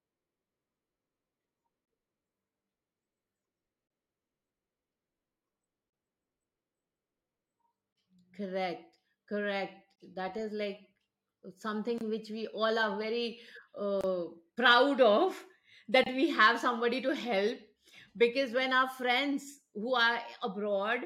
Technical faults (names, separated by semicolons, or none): gap at a join of encoded pieces